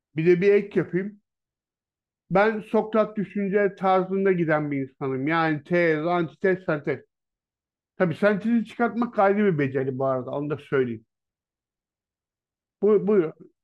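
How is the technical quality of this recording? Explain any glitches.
The recording has two brief glitches where the speech suddenly changes speed and pitch, then snaps back.

A drift correction step occurs from 0.77 to 1.62 s and again from 9.81 to 10.53 s. The cause is likely clock-matching software abruptly changing the playback rate to rebalance its buffer. In the first stretch the speech slows by 6.43% and drops about 115 cents, just over a semitone. In the second it speeds up by 6.43% and rises about 108 cents. Each time it sounds detuned and then jumps back to normal pitch.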